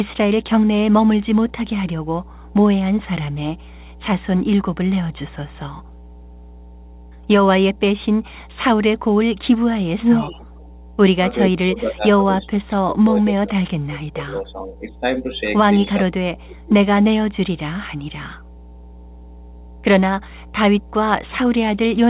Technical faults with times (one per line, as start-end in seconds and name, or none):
0.00-22.09 mains hum
10.00-10.72 echo leak
11.48-15.30 speech suppressed in double talk
16.04-16.91 speech suppressed in double talk